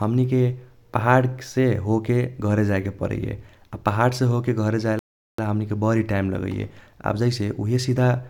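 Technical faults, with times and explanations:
4.99–5.39 s, Bluetooth stall: the speech cuts abruptly to complete silence for about 0.39 s, then carries on. The gap is likely a wireless stall, where interference held up incoming packets long enough for the receiving buffer to run empty, so playback stopped until data arrived again. On a waveform it appears as a flat, silent stretch with sharp edges. On a spectrogram it shows as an empty vertical band across every frequency, bounded by hard cut-off and restart lines.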